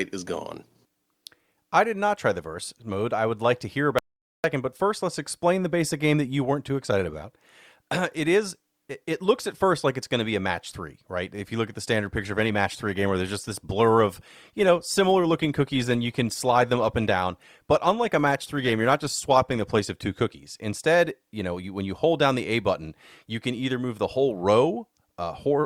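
At 3.99 s the input was likely lost briefly, producing an audio dropout to silence. The speech cuts out for 0.45 s, leaving a dead gap with no room tone, and resumes at 4.44 s. From 12.15 s to 20.15 s an adaptive stream at a lower bitrate takes over, a change that fits a switch from Opus at 64 kbit/s to 24 kbit/s. Codec artefacts rise abruptly without any gap.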